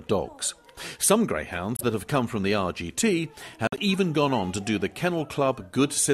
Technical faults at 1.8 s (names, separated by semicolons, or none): corrupt frame decoded